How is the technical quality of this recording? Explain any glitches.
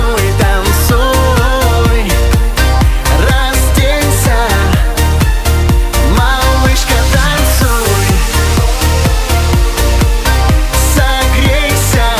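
No glitches or technical faults are audible anywhere in the recording.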